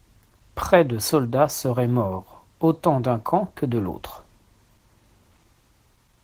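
Speech carries Opus voice compression throughout: a hoarse, slightly robotic grain from coarse excitation coding, fitting about 16 kbps. It differs from band-limiting because the high frequencies remain.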